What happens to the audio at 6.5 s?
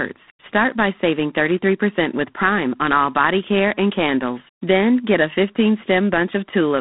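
At 6.5 s, as throughout the clip, G.726 ADPCM coarsely quantises prediction differences, consistent with 24 kbit/s, leaving a plainly audible rasping hiss tracking speech level, band-limited to 150 Hz–3.7 kHz, nothing above 3.9 kHz.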